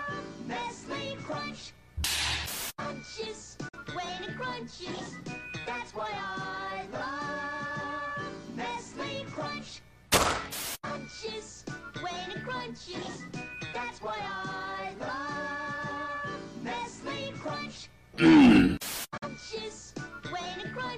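At 3.68 s the sound fades to silence over about 8 ms and returns at 3.77 s. The same digital broadcast dropout recurs from 19.17 s to 19.28 s. In each case the receiver stopped getting usable data and muted until good frames resumed. Each hole holds about 43 ms of missing audio, which fits a single lost frame. The quick fade and the short silence make the audio seem to blink out, and what played in that gap is gone.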